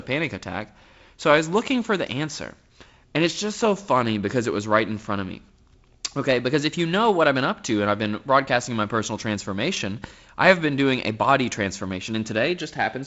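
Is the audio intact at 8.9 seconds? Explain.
Yes, the audio is intact at 8.9 seconds, with the speech carried through G.722 wideband telephone coding at 48 kbit/s and its band stopping at around 7.7 kHz as that coding normally does.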